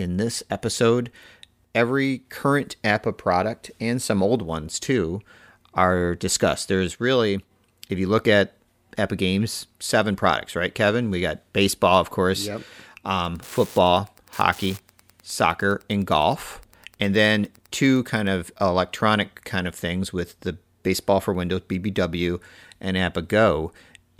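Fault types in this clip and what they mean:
Wi-Fi interference: a nearby radio's beacon gets rectified in the circuit, so from 13.19 to 18.35 s there's quiet ticking every 102.4 ms, well under the speech.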